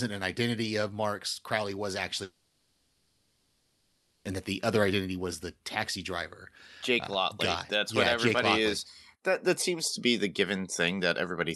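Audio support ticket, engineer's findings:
Long network dropout, 2.23 to 4.26 s: about 2 s of real signal replaced by synthetic fill. The last sound is stretched into a buzzy, hissy continuation that decays, never true silence, with no original content in the span. The stream then resumes past the gap, so that section of the sound is missing. Likely cause: packets lost in transit and concealed by the receiver's jitter buffer. Call path is audible as codec coloration with top end rolling off near 12 kHz, consistent with Opus at 64 kbps.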